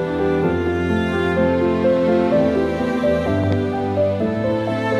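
At 3.44 to 3.55 s a loud pop lands as two sharp thumps in quick succession, peaking about 10 dB above the surrounding sound, which carries on underneath. The likely cause is a sudden voltage step, such as a plug, switch or static discharge, passing through the chain.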